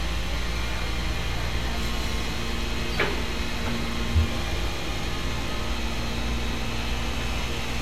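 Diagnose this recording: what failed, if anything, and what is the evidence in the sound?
Nothing in the signal chain failed: no dropouts, clipping, glitches or transport faults can be heard anywhere in the recording.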